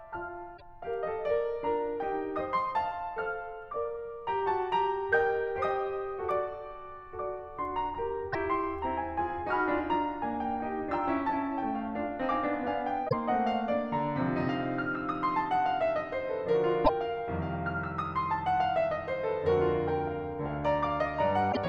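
Damaged data in a compressed stream hits this music five times: at 0.54–0.62 s, 8.30–8.35 s, 13.05–13.13 s, 16.81–16.90 s and 21.49–21.57 s. Corrupted bytes make the decoder misread frames and lose sync until the next header, so each spot gives a brief chirp or blip lasting 56 to 84 ms.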